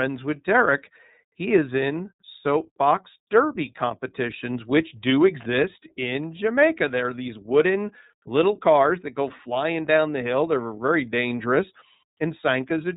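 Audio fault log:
throughout: iLBC codec. The spectrogram is empty above 3.8 kHz, and independently coded 30 ms frames make the speech plainly rough and synthetic, fitting the 13.33 kbps mode.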